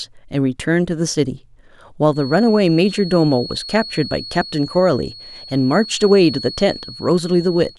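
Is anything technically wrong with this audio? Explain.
Yes. From 2.07 s to the end, a feedback whistle sits under the speech: a thin tone near 4.3 kHz, about 15 dB below it, swelling and fading slowly in level. The likely cause is a loudspeaker-to-microphone loop poised just short of runaway feedback. Unlike a steady mains hum, it is one high pitch that swells and fades.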